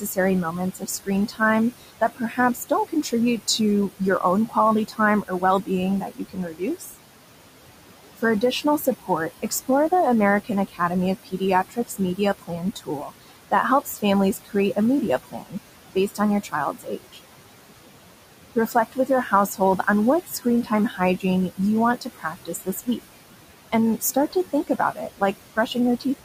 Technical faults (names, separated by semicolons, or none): noise suppressor artifacts; speech cut by the noise suppressor